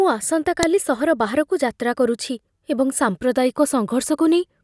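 A file header played as audio shows up at 0.63 s as a sharp, loud click in the speech. A second WAV piece was joined on without stripping its header, so those few dozen bytes of file metadata were read and played as raw samples, producing a brief snap.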